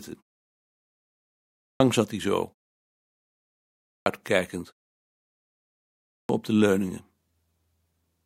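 Speech with a clipped start after a pause at 1.32–1.80 s, 3.60–4.06 s and 5.81–6.29 s. Each follows a silence of about 1.2 s, and nearly half a second is swallowed while the sleeping output device wakes, so "zat hij zo" and "op de leuningen" begin abruptly.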